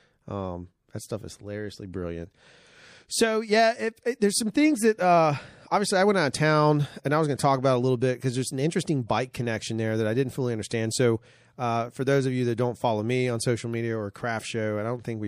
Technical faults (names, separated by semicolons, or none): MP3 compression; corrupt frame decoded